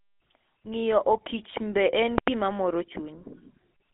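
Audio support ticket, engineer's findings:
Buzzy, gravelly roughness on the speech for the whole clip, band about 250 Hz to 3.5 kHz. GSM full-rate codec: regular-pulse excitation through a vocal-tract filter, fits 13 kbps. Plain band-limiting stays clean; this grit marks the coder.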